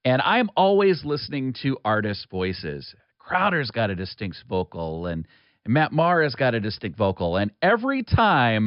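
Listening to this speech recording, nothing technical stood out as wrong at any point.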